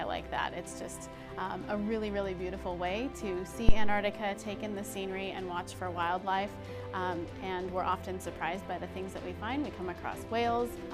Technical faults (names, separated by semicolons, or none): phantom power thump